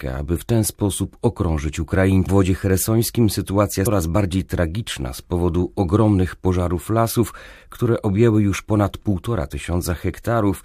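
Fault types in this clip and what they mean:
Damaged data in a compressed stream: bad bytes throw the decoder off sync, so you get quick blips at 2.25 s and 3.86 s.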